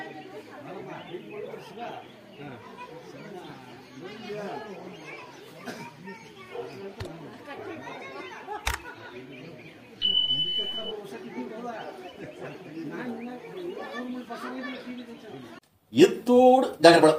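No technical faults occur in this audio, so there are none to describe in time order.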